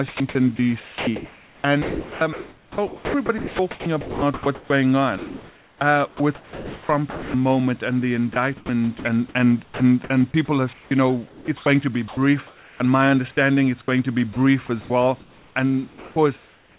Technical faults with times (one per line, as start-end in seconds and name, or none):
0.08-7.34 sound chopped by the voice detector
8.33-12.80 sound chopped by the voice detector
13.86-16.79 sound chopped by the voice detector